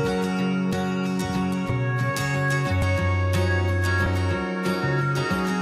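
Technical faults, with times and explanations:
0.73 s, 2.82 s and 4.06 s, dropped buffer (overrun): the likely cause is the program not reading its input in time, so the hardware overwrote a block of samples (roughly 10, 5 and 20 ms). The two sides then butt together with no gap, giving a small jump forward in the sound.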